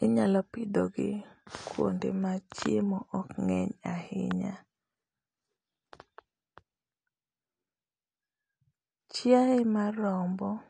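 From start to finish the speech has a hard ceiling near 9.8 kHz and plainly audible smearing and warble on sibilants. This is likely AAC compression, AAC-LC at a low bitrate, consistent with about 32 kbps, dropping high bands and coarsely quantising the rest.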